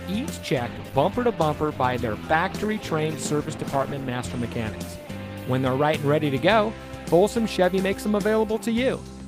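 From 0.55 s to about 6.03 s the sound turns rough and watery, with a dulled, muffled top end, and is at its coarsest for about 3.4 s before clarity returns. This is a call bitrate drop: the call's bandwidth estimate fell and the encoder was told to spend far fewer bits. The sound fits a fall from around 48 kbps to about 15 kbps, where Opus codes coarsely and trims the high frequencies.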